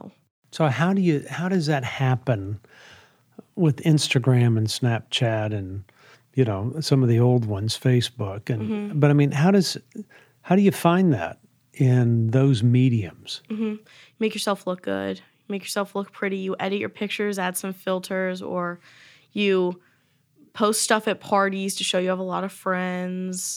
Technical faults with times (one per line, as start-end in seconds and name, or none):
none